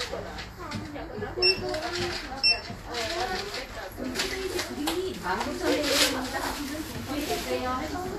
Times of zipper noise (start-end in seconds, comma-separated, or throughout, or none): none